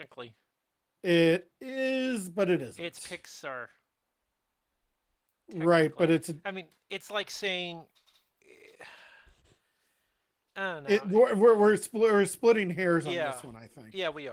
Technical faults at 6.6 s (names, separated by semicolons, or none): none